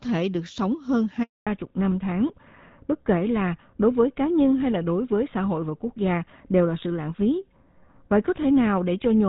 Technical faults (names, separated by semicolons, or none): handover gap; fallback to narrowband